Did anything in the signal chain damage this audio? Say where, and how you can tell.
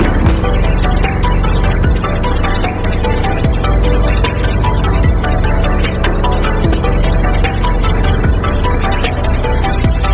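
No, nothing in the chain damaged this audio; it has simply gone through a call path, and with nothing above 4 kHz it has the narrowband sound you'd expect from a telephone-style codec such as G.711.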